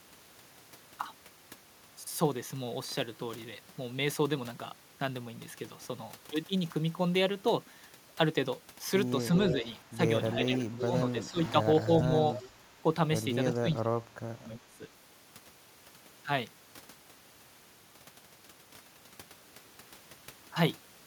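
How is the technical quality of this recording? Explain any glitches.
The recording has two related call-processing faults, both concentrated between about 9.4 s and 14.9 s: an echo leak and speech suppressed in double talk.

Echo leak appears at 9.38–9.81 s, 10.54–10.82 s and 12.36–12.49 s. A delayed copy of the speech trails the original by about 0.35 s. It sits roughly 10 dB below the direct speech in the first two instances and nearer 15 dB below in the third. The likely cause is a loudspeaker-to-microphone path on one side that its echo canceller did not fully cancel, so part of the signal was returned.

Speech suppressed in double talk occurs at 9.53–9.98 s, 10.43–12.12 s, 12.51–12.63 s and 13.53–14.86 s. The talker's level dips in pieces. The drops are around 10 dB in the short first and third events, around 15 dB across about 0.7 s of the second, and a heavy dip of roughly 30 dB over about a second in the last. 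The likely cause is the echo canceller attenuating both the talker and the echo when both sides were active at once.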